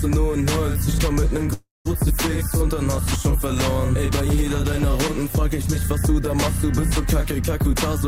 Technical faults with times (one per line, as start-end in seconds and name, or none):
1.53-1.87 call audio freeze